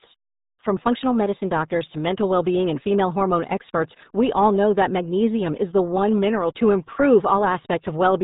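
From start to finish the speech sounds muffled and gargly, with nothing above about 3.8 kHz and a heavy, bubbling coarseness on every syllable. That is the RealAudio 14.4 codec: its dial-up-era compression, fitting an 8 kbit/s stream, discards the upper band and smears detail.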